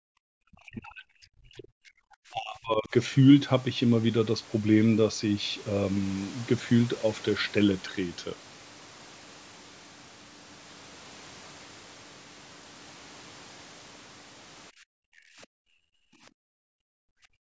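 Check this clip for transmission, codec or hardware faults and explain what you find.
Two echo-canceller faults affect this speech clip, and the call's microphone chain shows as a clean band limit with nothing above 8 kHz.

Background gated by the echo canceller occurs from 0.00 to 0.13 s and again from 14.71 s to the end. While the loudspeaker path was active, the canceller pulled the microphone down by about 40 dB, so the room tone collapses to near silence and then returns. On the waveform the noise floor flattens to a thin line. On a spectrogram the background texture vanishes across all frequencies in a sharp-edged block, about three seconds long at the end.

Speech suppressed in double talk runs from 0.41 to 2.93 s, with about two seconds of the talker affected. The near-end voice dips and breaks up in pieces, falling by roughly 40 dB at its deepest. The likely cause is both sides talking at once, with the canceller unable to tell this talker from loudspeaker echo and attenuating both. 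The waveform shows the speech envelope chopped into shrunken, uneven segments. The spectrogram shows the harmonics and upper band thinning or dropping out in patches.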